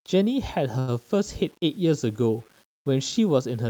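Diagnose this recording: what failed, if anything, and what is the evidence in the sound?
Sample-format conversion: low bit depth without dither makes quiet speech grainy throughout, likely from 8-bit rounding. The spectrogram shows signal-following noise roughly 35 dB down.

Network: a short stall from a late packet, 0.79 to 0.91 s, stretches one sound by 85 ms with nothing lost. The waveform shows a held, repeated stretch.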